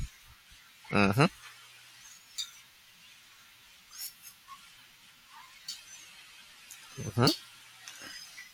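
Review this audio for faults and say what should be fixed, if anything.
A brief glitch at 0.84 s is damaged data in a compressed stream: corrupted bytes there made the decoder misread the frame, lose sync and jump to the next valid header. Carry the stream over a checksummed, error-checked transport and verify file integrity before decoding.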